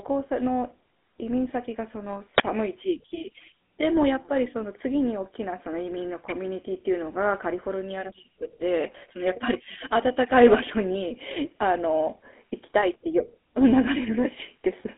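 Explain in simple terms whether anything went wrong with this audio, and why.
Two things went wrong here. The whole speech clip has been through the GSM full-rate codec, the old mobile phone voice compression. It rebuilds the voice from a rough model of the throat and mouth, driven by a thin stream of pulses, so everything comes out buzzy and gravelly, and the damage is plainly audible. It's also squeezed into a phone-line band of about 250 Hz to 3.5 kHz, with nothing at all above 3.8 kHz, so it sounds thin and muffled.

Then, from 2.38 to 2.40 s, there's a quick, harsh blast of digital noise. That's an uninitialised buffer. A chunk of memory got sent to the speakers before any real audio had been written into it, so whatever junk was sitting there got played as if it were sound. It's over in a flash, and the length fits one 20 ms block of garbage slipping through.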